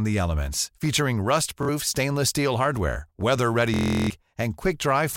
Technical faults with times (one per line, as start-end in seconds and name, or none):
1.63-1.69 Bluetooth stutter
3.74-4.10 Bluetooth stutter